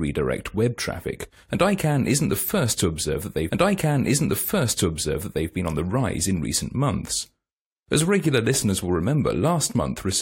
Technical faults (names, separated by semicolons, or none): stream segment repeated